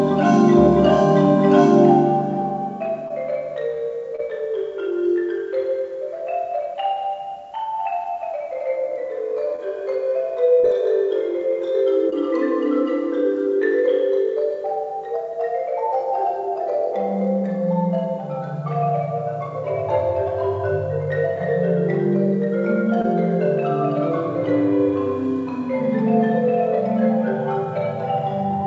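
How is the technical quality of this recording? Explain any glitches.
The recording has six short dropouts. Short concealed packet loss occurs at 3.08–3.12, 4.16–4.20, 9.56–9.60, 10.60–10.66, 12.10–12.14 and 23.02–23.06 s. Each time, audio failed to arrive (about 20 ms, and 40 ms at 10.60 s). The receiver extended the preceding sound to fill the gap, so each one is heard as a brief smear or wobble. The sound throughout also stops at about 7 kHz, from the G.722 call codec at 64 kbps.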